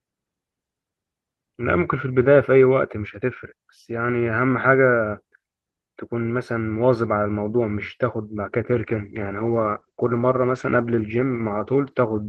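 From 8.73 s to the end, a call bitrate drop, fitting a fall from about 32 kbps to 12 kbps, makes speech rougher and muffled. The spectrogram's ceiling drops from 12 kHz to 8 kHz.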